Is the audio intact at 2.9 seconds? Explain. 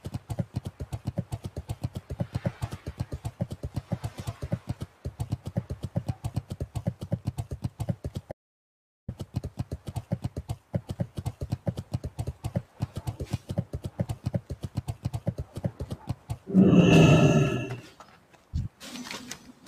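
No. A noise suppressor built for speech was left running over this material, so the sound is cut by the noise suppressor between 2.88 and 3.91 s. It mistook part of the audio there for noise and pulled it down harder than its surroundings, with the deepest drop about 6 dB. Roughly a third of a second within that span is affected. Steady and decaying parts sink or have their tails clipped short, while sudden onsets come through largely untouched.

The cut at 2.9 s sits within a broader problem: a noise suppressor applied to music or sounds throughout the clip. The processor keeps treating sustained tones, ambience and reverberation as unwanted noise, so its gain swings by something like 10 dB as it grabs and releases them. Attacks survive better than held material and decays, which gives the audio an audible pumping and fluttering and a thinned-out body.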